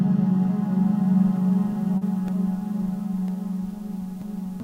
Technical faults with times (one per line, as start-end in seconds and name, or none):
1.97-2.03 short concealed packet loss
2.28-4.28 periodic USB or driver dropouts